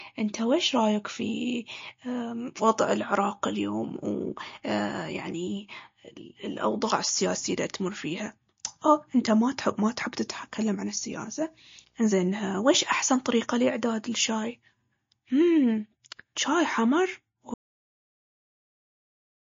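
Across the whole speech clip the sound is watery and swirly, with smeared consonant attacks and nothing above 7.2 kHz. This is likely MP3 compression at a low bitrate, fitting roughly 34 kbps, where the encoder drops the treble and lets weak frequency lines flicker between frames.

From 10.25 s to 12.25 s a video or display buzz appears: a 59.94 Hz field-rate buzz with hash above it and a thin 15.7 kHz line-rate whine. It sits faint, well below the speech, and comes from a screen or video cable coupling into the audio path.

At 17.54 s the audio drops out to silence and stays that way to the end. The gap holds silence with no room tone, which points to the input being lost while recording continued. Whatever was spoken in that stretch is gone.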